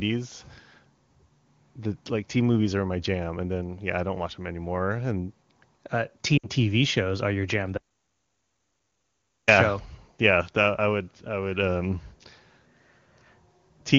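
Around 6.37 to 6.49 s you get lost AMR speech frames: roughly 60 ms that fits about three 20 ms frames failing their checks. The wideband decoder keeps repeating its last pitch and vocal tract settings while pulling the level down, so the sound drops to near silence, then comes back a touch rough.

Right after "shows are your jam", at 7.78 s, there's an audio dropout to silence lasting about 1.7 s, to 9.48 s. It's dead silence with no room tone, most likely the input link or device dropping out, and whatever came in that gap is simply gone. The HD Voice codec itself sounds clean, consistent with a high AMR-WB rate.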